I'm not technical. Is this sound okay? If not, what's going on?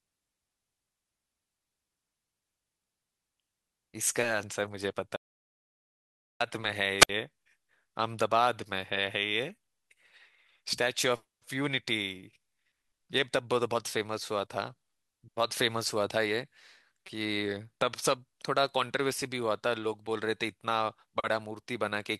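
No. From 5.17 to 6.40 s the speech cuts to dead silence for about 1.2 seconds, an audio dropout to silence, likely from a lost connection, so that speech is gone. At 6.98 to 7.10 s there's a brief burst of hiss and a 63 ms hole, a wireless microphone squelch dropout: the radio signal faded and the receiver muted itself.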